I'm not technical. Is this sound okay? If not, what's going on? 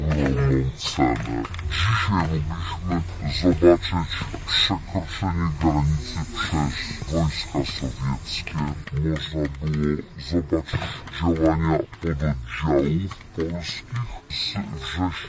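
No. From start to finish everything sounds slowed down and deep, at half speed and a full octave lower. This is a wrong sample rate: the audio is played back at half the rate it was recorded, which fits 32 kHz audio played at 16 kHz.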